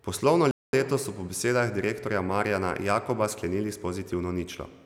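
At 0.51 s the speech cuts out into complete silence for about 220 ms, resuming at 0.73 s. This gap is a playback stall, most likely the player running short of data or its output thread being held up until it could recover.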